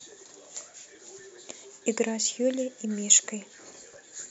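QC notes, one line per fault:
Nothing to flag here, the speech comes across without a single problem worth writing down.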